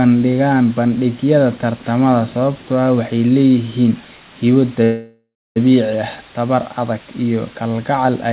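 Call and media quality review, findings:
Low bit depth with dither: steady, even hiss across the whole speech clip, no distortion. Sounds like roughly 6-bit resolution, noise about 20 dB under the signal. Rounding error spread out by dither.

Call audio freeze, 4.84 to 5.58 s: last sound drags on as a fading buzz or hiss, then about 0.27 s of silence. Likely a jitter buffer underrun from delayed packets. Playback picks up where it left off, nothing lost, just 0.72 s pushed late. Narrowband call path, nothing above 4 kHz, fits G.711.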